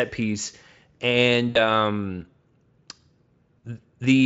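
A speech recording with two dropouts covered by VoIP packet loss concealment, at 1.49 to 1.63 s and 3.59 to 3.65 s. The decoder stretches the last sound into a fading buzzy tone or coloured noise, about 60 ms and 40 ms of missing audio. Audible Speex coding damage is at most faint.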